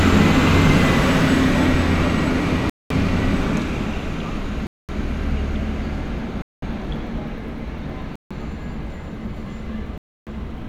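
An everyday-sound recording that drops to full silence five times, at 2.70 to 2.91 s, 4.67 to 4.89 s, 6.42 to 6.62 s, 8.16 to 8.31 s and 9.98 to 10.27 s, each gap lasting roughly 0.15 to 0.29 s. This is most likely a Bluetooth stall: the headphones' buffer ran empty while delayed packets were resent. Unlike packet-loss concealment, the gaps are true silence rather than smeared or repeated fill.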